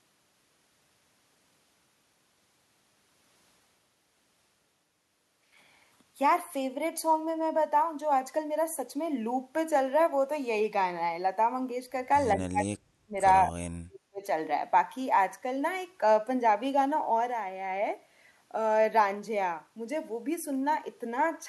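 From 12.35 to 13.15 s and again from 13.49 to 14.23 s the speech sinks sharply, by up to about 40 dB. This is speech suppressed in double talk, likely an echo canceller muting the near talker while the far side spoke.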